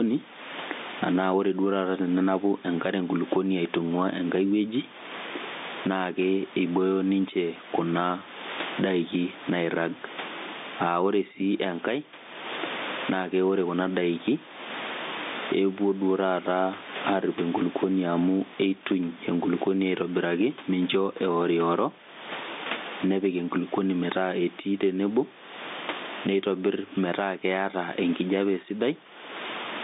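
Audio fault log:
Throughout, gain pumping: the level swings by something like 20 dB. Loud and quiet stretches end up squashed close together, which likely comes from the mic gain being set far too hot while a fast limiter keeps yanking it back down on each peak. All of this rides on a narrow phone-line band of roughly 200 Hz to 3.7 kHz.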